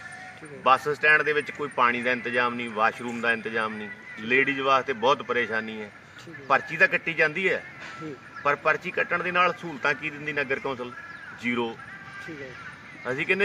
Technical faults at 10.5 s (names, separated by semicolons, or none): none